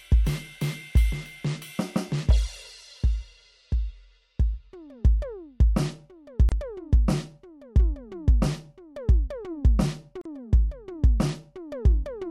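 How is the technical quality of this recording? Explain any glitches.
The music has two short dropouts, both gaps at a join of encoded pieces. At 6.49 to 6.52 s and 10.21 to 10.25 s, separately encoded sections were butted together untrimmed, so encoder delay and padding leave roughly 28 and 40 ms of silence, with smeared edges, before the music resumes.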